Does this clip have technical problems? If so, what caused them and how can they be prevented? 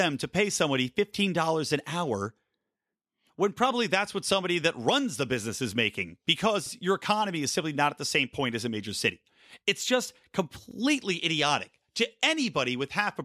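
Yes. Overlapping chunks cause a 50 ms replay every 4 s, at 2.61–2.66 s after "fifteen dollars an hour", 6.66–6.71 s before "your economy is simply", and 10.71–10.76 s before "idiotic to". Each new 4 s block begins 50 ms before the previous one ended, so that slice plays twice as a brief stutter. To prevent this, align chunk boundaries exactly, or crossfade and trim the overlap when reassembling.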